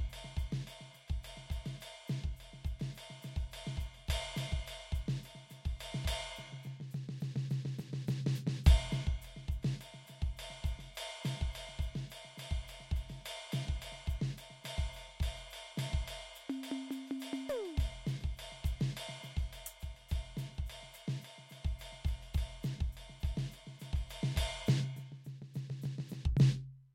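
A music clip with no technical faults heard.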